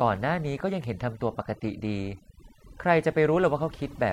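Throughout the speech, overdone noise removal is audible: a noise reducer set far too aggressively switches individual frequency bands down whenever they sit near its noise estimate. Gaps fall to near silence with twinkling specks, and a spectrogram shows scattered isolated dots in an otherwise empty background.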